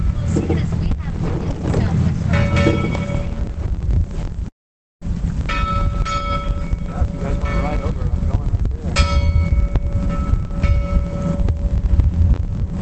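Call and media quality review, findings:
Long network dropout, 4.48–5.04 s: the sound stops and is replaced by a fading buzz-like continuation of the last audio, decaying to near silence for about half a second. Likely cause: packets lost upstream, with the receiver concealment extrapolating and then muting.

On resume, roughly 0.5 s of material is gone rather than delayed, and timing shifts by a few tens of ms as the jitter buffer re-settles. WebRTC call path: Opus coding noise audible, top end capped near 8 kHz, consistent with a 24 kbps setting.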